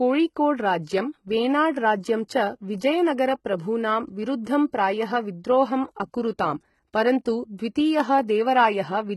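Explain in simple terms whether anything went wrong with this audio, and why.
Yes, something's off, and it runs through the whole clip. The speech sounds like HE-AAC compression, most likely a heavily squeezed version of it. That kind of codec only properly stores the lower part of the sound and then fakes the treble by copying lower bands upward. So there's still treble up top, but it isn't the real thing. The s sounds come out gritty and lispy, and there's nothing at all above about 11.8 kHz.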